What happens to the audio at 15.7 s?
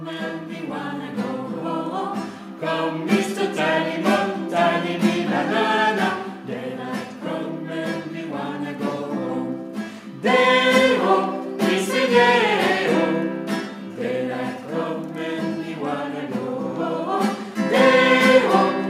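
Nothing goes wrong at 15.7 s; the audio there plays through intact, with no dropout, click or distortion to be heard.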